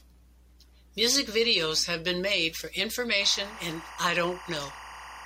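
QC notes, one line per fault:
3.21–5.25 s, timecode bleed: a chirping warble near 1 kHz and 2 kHz sits roughly 15 dB under the speech until the end. Linear timecode is leaking in, its square wave flipping between those two pitches in a pattern repeating 23.976 times per second, unlike a single steady hum.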